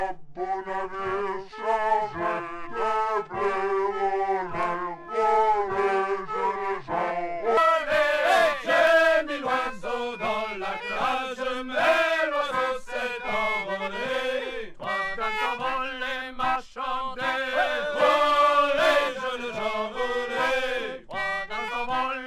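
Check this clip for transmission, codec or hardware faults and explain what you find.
One fault is present. From 0.0 to 7.57 s, wrong sample rate: playback at 0.667 speed, 7.02 semitones low. This fits 48 kHz audio played at 32 kHz. The sound drags, deep.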